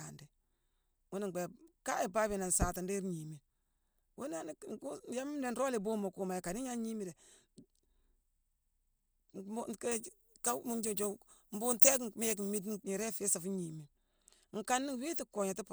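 Pre-emphasis left on affects this speech recording from 9.92 to 12.84 s. The treble boost applied for transmission was never undone, lifting 10 kHz about 11 dB above 1 kHz, which fits a 50 µs FM curve, so that stretch sounds thin, bright and sibilant.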